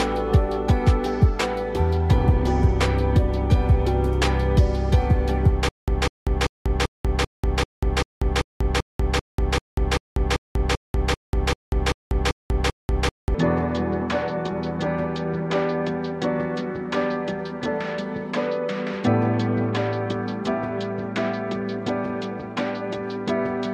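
From 5.69 to 13.35 s, stutter with silent gaps: a 199 ms burst repeats every 390 ms, separated by flat-line waveform silence, likely a stalled stream.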